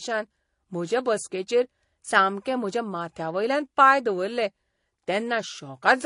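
Speech runs the whole way through with two layers of compression damage: swirly, smeared high-frequency artefacts overlaid with a second, grainier set, and nothing above 10.5 kHz. A single low-bitrate codec would leave one artefact signature. These stacked ones suggest transcoding between lossy codecs, likely AAC at a low bitrate re-encoded to MP3.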